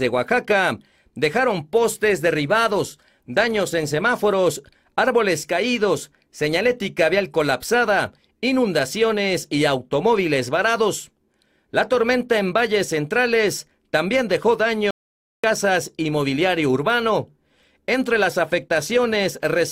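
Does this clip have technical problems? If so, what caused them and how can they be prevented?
Yes. A playback stall runs from 14.91 to 15.44 s. The sound cuts out mid-flow for 0.53 s, then resumes. The likely cause is the player starving of data or its thread blocking. A larger buffer and a higher-priority audio thread would prevent it.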